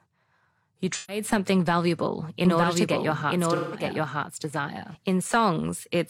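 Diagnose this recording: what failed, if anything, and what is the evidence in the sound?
Codec/network stage: AAC frame loss with concealment. At 0.95 to 1.23 s, just before "something valuable", and again at 3.55 to 3.83 s, the speech turns smeared and noisy. That's the decoder stretching the last good spectrum over roughly 130 ms and 170 ms of missing frames.

Storage or editing stage: doubled audio track. From 2.45 to 4.95 s there's a second full-band copy of the speech, about as loud as the original and around a second behind, with no room colour. It switches on and off abruptly. The likely cause is an edit holding two out-of-step copies.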